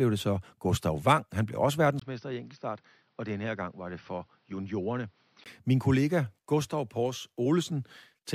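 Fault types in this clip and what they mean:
Input switched to a poorer device: from 2.0 to 5.46 s, likely a change to another microphone or a headset's call profile. Nothing above 6 kHz passes, level drops about 10 dB, new noise sits roughly 35 dB down, and a 20 ms gap marks the switch.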